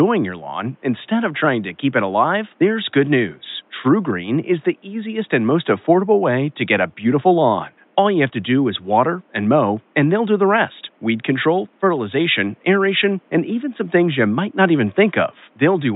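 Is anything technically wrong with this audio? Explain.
No, nothing's wrong here; the faint room noise sitting about 39 dB below the speech is just the natural background of the space where the microphone was, not a fault of the system.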